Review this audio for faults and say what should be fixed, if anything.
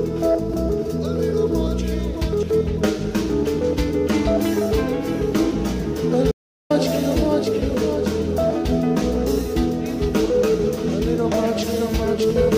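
The input feed most likely failed for a moment, through a dropped device connection, a broken link or an accidental mute, while the recorder kept writing silence. The result is an audio dropout to silence from 6.32 s to 6.70 s: the sound stops abruptly mid-flow, leaves roughly 0.39 s of dead silence with no room tone underneath, then resumes just as abruptly. Whatever occurred in that gap is lost. Securing cabling and connections and monitoring input levels during capture would prevent this.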